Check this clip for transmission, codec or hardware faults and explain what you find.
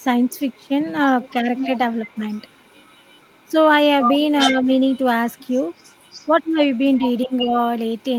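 Two faults run through this speech clip: a constant faint echo, and brief dips in level at four points.

Echo leak, 0 to 8.19 s: a delayed copy of the speech trails it by 373 ms, roughly 25 dB quieter. It most likely comes from a far-end loudspeaker whose echo canceller let some pickup through. On a spectrogram, faint duplicate harmonic traces sit shifted right of each syllable.

Speech suppressed in double talk at 1.41 to 1.47 s, 2.05 to 2.2 s, 4.5 to 4.67 s and 6.99 to 7.55 s: the speech briefly sags by around 5 dB at the first three and around 15 dB at the last. The likely cause is an echo canceller ducking its own talker along with the loudspeaker echo when the two overlapped. These show as notches in the waveform envelope.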